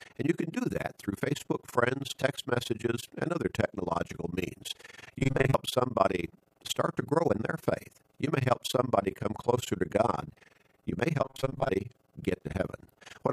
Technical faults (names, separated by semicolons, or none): overlap-add ripple; robotic sound from repeated short buffers